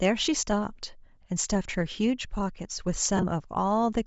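Speech carrying a breathy, grainy edge across the whole clip, most likely from Bluetooth LC3 compression at a low bitrate. The damage is plainly audible and fits roughly 32 kbps with 7.5 ms frames. The upper spectrum has been thinned out and refilled with noise, so sibilants and the top of the voice sound hissy and synthetic. That separates it from MP3- or AAC-style damage, which tends toward swirling, warbly artefacts or a clean cutoff. Between 3.17 and 3.24 s come lost LE Audio frames. Short stretches, consistent with about five frames spread over some 60 ms, with no single run longer than about 20 ms, are replaced by the decoder repeating the previous spectrum with scrambled phase. The result is a brief noisy smear rather than silent holes or clicks. That is what distinguishes this concealment from plain dropouts or a muted gap.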